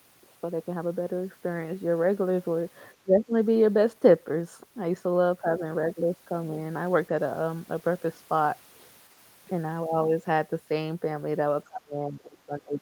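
At 3.03 to 3.33 s the speech ducks by roughly 20 dB, and again from 11.64 s to the end it sinks about 25 dB. That's likely speech suppressed in double talk: both ends talked together, and the echo canceller, unable to separate this talker from loudspeaker echo, turned everything down.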